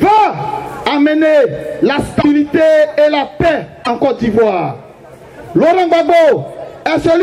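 At 2.21 s and again at 3.83 s, the sound skips ahead and a brief chirp, burst of noise or short hole follows, lasting about 40 ms each time. The likely cause is a broken MP3 bit reservoir. Frames went missing, so the next frames read borrowed bytes from the wrong data.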